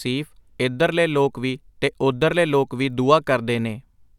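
No technical faults can be heard anywhere in the speech recording. There is nothing to place on a timeline and nothing to explain.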